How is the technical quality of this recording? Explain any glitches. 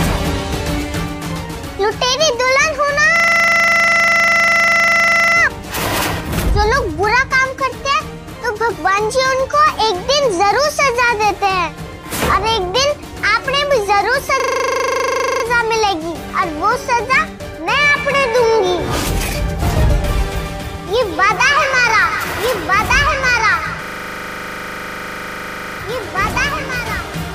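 The recording suffers a recurring system hang loop. It occurs from 3.16 to 5.36 s, 14.4 to 15.44 s, and 23.84 to 25.8 s. Each time, a 40 ms slice repeats, giving a rough buzz at 25 Hz. The system stalled while the hardware replayed its buffer, and little audio seems lost.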